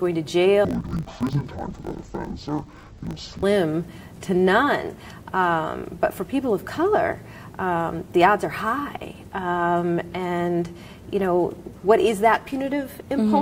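From about 0.65 s to 3.44 s there's a stretch of interleaved audio read as planar. The stream alternates left and right samples, but each 20 ms block got its first half treated as left and its second half as right. Both halves then play out stretched to double length, so the sound drops an octave but keeps its overall pace. With blocks that short, it comes across dull and robotic, with a steady 50 Hz buzz from the block boundaries.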